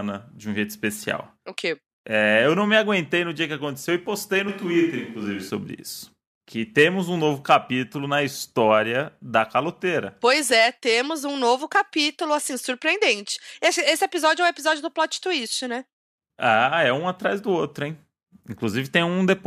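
From 4.49 s to 5.50 s, just after "que aconteceu e postei" and until "isso que temos um", the speech turns suddenly roomy and hollow, with thinner bass, then snaps back just as abruptly. This is a switch to a distant microphone, likely because the close microphone's signal dropped out and a pickup further away took over. The loudness stays about the same, and the room noise sits low, roughly 35 dB under the speech. On a spectrogram the low frequencies fade for that one second and reverberant smearing blurs each syllable's edges. The waveform shows softer onsets and longer decays between syllables, with hard boundaries at both ends.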